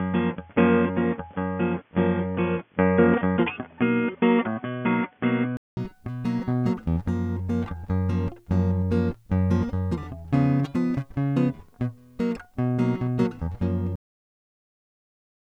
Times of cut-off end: 13.96-15.59

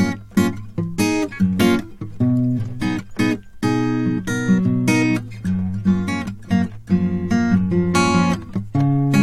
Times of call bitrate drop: none

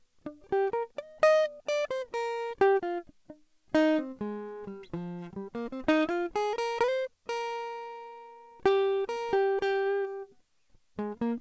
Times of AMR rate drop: none

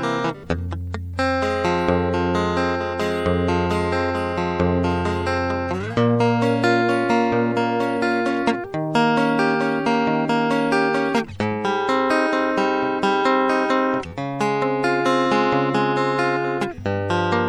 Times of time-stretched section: none

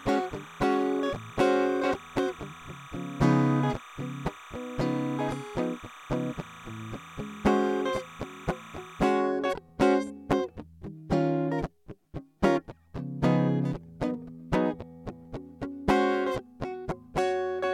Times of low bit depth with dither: none

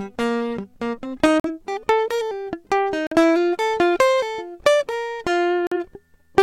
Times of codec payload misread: none

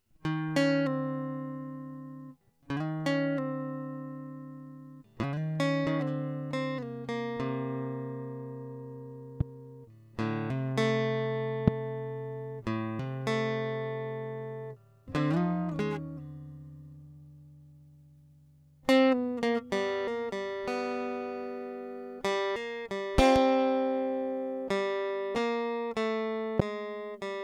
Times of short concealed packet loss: none

